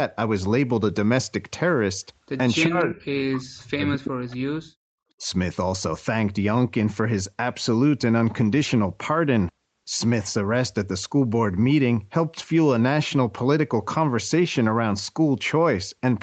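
From 2.66 to 4.76 s the speech is pushed down by roughly 40 dB for about two seconds, and again briefly from 5.17 to 5.23 s by about 25 dB. This is speech suppressed in double talk, likely from an echo canceller ducking the talker while the far side spoke. Inside the first dip, from 2.80 to 2.84 s, a faint echo leak slips through: a scrap of sound delayed by 345 ms and about 30 dB below the speech. It is likely residual loudspeaker pickup that the canceller missed. Its fixed delay separates it from room reverberation, which would trail off smoothly.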